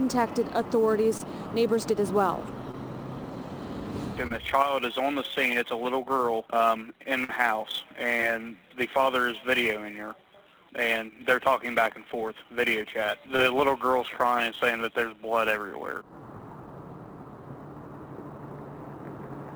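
A hiss and roughness rides on the audio throughout, growing with loud and bright passages and vanishing in silence. This is sample clock jitter: the converter clock wanders by several microseconds, so samples land early or late and leave an error roughly 25 dB below the signal. Brief smears or wobbles occur at 1.17, 2.71, 4.27, 8.17 and 13.36 s. Each is short concealed packet loss, where about 20 ms of audio never arrived and the receiver bridged the hole by extending the preceding sound before blending back in. At 7.24 to 7.31 s, a longer held, fading stretch is followed by a jump forward in the audio. This is a burst of packet loss: about 40 ms went missing, and the concealment stretched the last sound while turning it down until real audio resumed.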